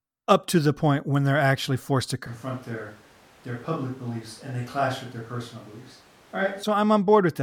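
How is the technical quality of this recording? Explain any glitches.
There's one real glitch, a switch to a distant microphone. From 2.27 to 6.63 s, right after "they're actually forced to", the sound suddenly turns roomy and thin, drops about 5 dB and picks up room noise, likely because the close mic dropped out.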